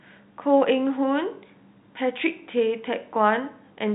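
Nothing goes wrong anywhere in this bit of speech; it just sounds like an ordinary phone line, with the G.711 telephone coding keeping everything below about 3.9 kHz as you'd expect.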